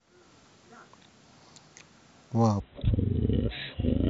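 A section at the wrong speed, likely from a playback clock mismatch, runs from 2.6 s to the end at 4.09 s at about 0.53 times normal speed. The speech turns slow and drawn out, dropping roughly ten semitones in pitch.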